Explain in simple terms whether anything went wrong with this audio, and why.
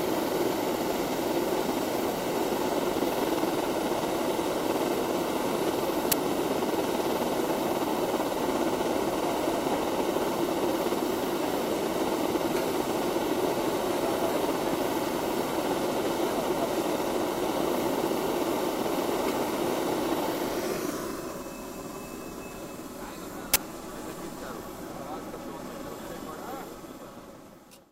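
Something did go wrong, twice: an uninitialised buffer, heard as a sudden, harsh blast of digital noise at 6.12 s and again from 23.54 to 23.56 s. The player sent out a chunk of memory before any audio was written into it, so random leftover data came out as sound. Each burst lasts exactly one chunk, about 11 ms and then 21 ms, which fits 512- and 1024-sample buffers. Unlike a simple click or dropout, it's loud noise rather than silence or a single tick.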